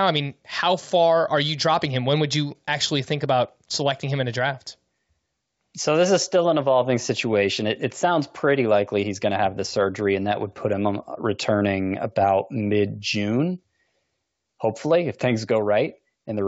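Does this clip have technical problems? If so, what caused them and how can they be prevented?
No, nothing in this speech clip stands out as a technical problem. It carries the band limit of G.722 wideband telephone coding, with little or no audible coding damage, which fits the full 64 kbit/s mode.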